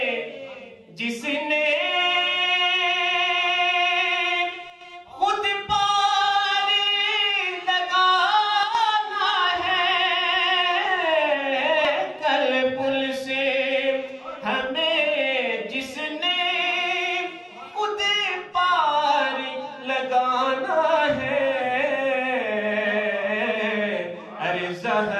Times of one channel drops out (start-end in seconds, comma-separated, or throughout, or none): 4.70-4.81, 8.63-8.75